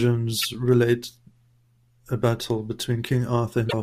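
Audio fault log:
0.42–0.45 s and 3.66–3.74 s, damaged data in a compressed stream: corrupted bytes in the encoded speech made the decoder misread those frames, lose sync and hunt for the next valid header, so each spot comes out as a brief chirp, squawk, click or short hole that breaks the flow of the audio.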